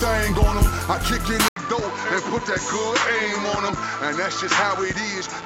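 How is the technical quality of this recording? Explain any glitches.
The recording degrades partway through. At 1.48 s there is an 80 ms gap, after which the sound loses everything above 7.6 kHz, drops a few dB in level and carries a new, faint noise floor to the end. This is likely an input switched to a poorer device, one with a narrower band and its own background noise, so the audio turns duller and flatter from that point.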